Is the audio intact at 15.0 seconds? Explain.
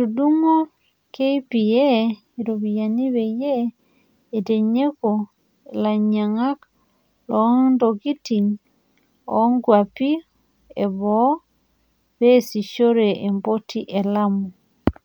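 Yes, at 15.0 seconds the audio is intact, with no fault heard at that moment.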